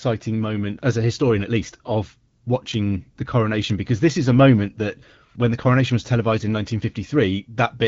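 No technical faults can be heard in this speech, which comes through an AMR wideband (HD Voice) link at 12.65 kbit/s.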